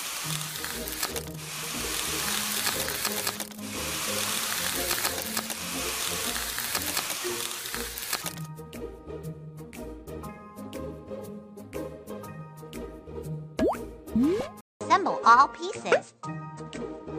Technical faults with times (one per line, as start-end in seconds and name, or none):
14.61-17.18 input switched to a poorer device